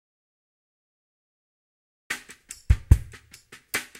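Audio dropout to silence from the very start until 2.1 s: the input was likely lost, so only silence was written, with no room tone, before sound abruptly begins.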